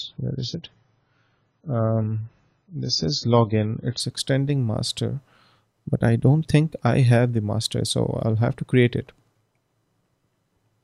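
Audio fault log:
0.0–4.0 s adaptive stream starting at a low bitrate: the player began on a thin low-bitrate version, so nothing sounds above 7 kHz and codec artefacts are stronger until quality jumps, gaplessly, at 4.0 s.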